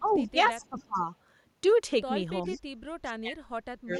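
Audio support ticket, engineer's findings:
Speech suppressed in double talk: echo canceller likely clamping the near-end path while the far end is active, unable to separate local talker from loudspeaker echo. Speech dips and breaks up across 0.0 to 1.09 s (roughly half a second affected, down about 20 dB), briefly at 2.47 to 2.6 s (about 10 dB), and from 3.04 s to the end (roughly 0.7 s affected, deepest drop about 30 dB).

Echo leak: far-end echo canceller likely leaving residual loudspeaker pickup, returned to this side. Faint delayed copy of the speech, 406 ms behind, in short scraps at 0.06 to 0.29 s and 0.65 to 0.83 s (about 25 dB below the speech), then at 2.45 to 2.61 s and 3.96 s to the end (about 30 dB below).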